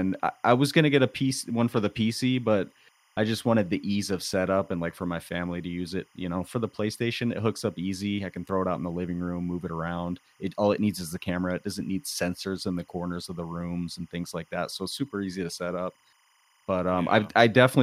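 Timecode bleed runs throughout the speech. Linear timecode at 25 frames per second leaks in, adding a faint chirping warble near 1 and 2 kHz, roughly 40 dB down.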